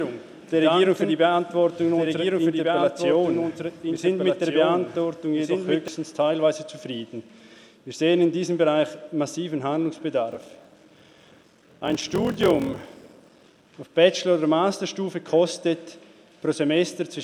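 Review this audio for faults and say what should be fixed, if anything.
From the start until 5.88 s, a doubled audio track is already under way. A second full-band copy trails the first by roughly one and a half seconds, about 5 dB quieter. It has no decay or room colour, so it sounds like a clean repeat, not an echo. It stops abruptly at 5.88 s. The likely cause is the same signal being captured again through a slower path, or an edit holding two copies out of step. To prevent it, route each source through only one capture path and check edits for duplicated regions.

From 10.3 to 13.67 s there is a block size mismatch (padded). One stage writes shorter blocks than the next one reads, and the shortfall in each block is filled with silence. That inserts a tiny gap in every block, heard as a buzz at 43.1 Hz. The gap rate fits a 1024-sample read block. The sound also runs slow, at 0.861 times normal speed, but keeps about its normal pitch. 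To prevent it, configure both stages to use the same block size.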